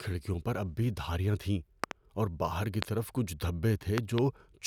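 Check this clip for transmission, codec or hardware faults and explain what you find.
Three loud pops break into this speech clip. The first is a double pop at 1.84 to 1.93 s, between "اب بھی دھاریاں تھیں" and "اور باہر کی طرف". A single pop follows at 2.83 to 2.85 s, between "تھیں اور باہر کی" and "طرف کچھ". A second double pop comes at 3.98 to 4.20 s. Each peaks roughly 20 dB above the speech. The likely cause is a sudden voltage step, such as from a connector, switch or static discharge, added to the signal and shaped into a thump by the circuitry downstream. Unlike a dropout, the speech carries on beneath each pop.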